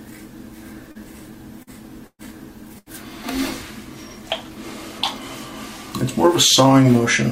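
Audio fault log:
0.91–0.98 s and 1.63–1.70 s, short concealed packet loss: about 40 ms went missing each time and was filled by extending the preceding sound. The fill blends back quickly, leaving a brief smear.
2.07–2.22 s and 2.79–2.89 s, burst of packet loss: 120 ms and 80 ms were lost. The continued sound fades, reaching about 50 ms of silence in the first burst, and the audio resumes later with material skipped.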